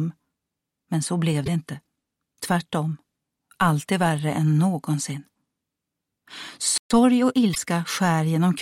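At 1.43 s the audio breaks up briefly for about 56 ms, ending at 1.48 s. A second one occurs from 7.51 to 7.58 s. Both are damaged data in a compressed stream. Part of the encoded data was corrupt at those points. The decoder misread the frames there and lost its place in the stream. It then hunted for the next valid frame header. At 6.78 s the sound cuts out abruptly in mid-flow. Silence lasts about 127 ms, until 6.91 s. It then picks up again. This is a playback stall. The likely cause is that the player ran short of buffered data, or its audio thread was briefly blocked. Output simply stopped until data was available again. Right after the gap, from 6.91 to 7.72 s, the audio runs fast. It plays at about 1.15 times normal speed, yet the pitch stays the same. This is time-compressed catch-up. The player is working off the backlog left by the stall. It trims small slices of audio and cross-fades across the joins. 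The second break-up at 7.51 s lands inside this hurried stretch.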